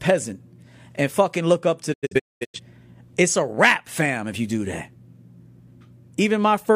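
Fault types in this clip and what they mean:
Digital broadcast dropout, 1.92 to 2.60 s: the receiver stopped getting usable frames and muted until clean ones returned. The speech fades out over about 20 ms and breaks into several short holes rather than one gap. Roughly 427 ms of sound is missing across a 597 ms stretch, and the longest silent run is 213 ms. That pattern points to around ten corrupted frames. Whatever was broadcast in those holes is simply gone, not delayed.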